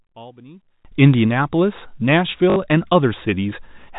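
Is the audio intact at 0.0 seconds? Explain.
No. From 0.0 to 0.85 s the speech drops by about 25 dB and sounds faint, likely from one channel inverted, so the shared centre cancels when summed to mono. The waveform shrinks to a sliver and the spectrogram fades.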